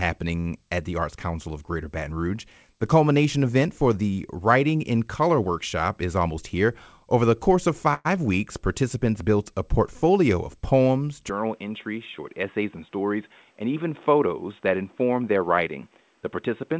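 At 0.40–0.47 s a short stall from a late packet holds the sound for 47 ms. The jitter buffer ran dry, the receiver stretched the last sound, and playback resumed with nothing lost.

From 6.01 to 6.55 s a jitter buffer speed-up plays the speech at 109% by trimming pitch-period slices, roughly 50 ms in total. Pitch stays the same, but the delivery sounds briefly hurried.

At 7.94–8.07 s, just after "the course of", there is a call audio freeze, likely from packets delayed in transit. The last sound continues as a fading buzz for 110 ms, including 20 ms of silence, then resumes where it stopped.

From 11.30 s to the end, following "a portfolio of poems", the input switched to a poorer device, likely. The band now stops at 3.8 kHz instead of the 8 kHz of the G.722 call path, so the sound turns dull. A new noise floor sits about 40 dB below the signal, and there is no level change or gap at the switch.

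At 14.81–15.79 s a second jitter buffer speed-up runs at 108% and removes roughly 100 ms. The pitch is unchanged, but the speech is noticeably rushed.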